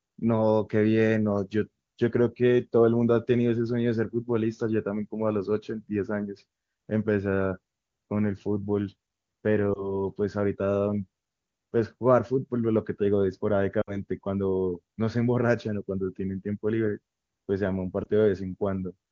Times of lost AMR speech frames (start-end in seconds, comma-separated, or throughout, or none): 9.73-9.94, 13.81-14.01, 18.03-18.07